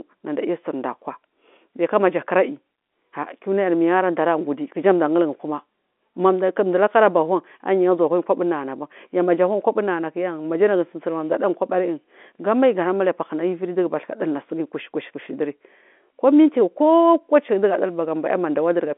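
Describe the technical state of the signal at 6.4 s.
At 6.4 s the audio is intact, carrying speech through its G.711 telephone coding, which limits it to the narrow phone band with nothing above about 3.8 kHz.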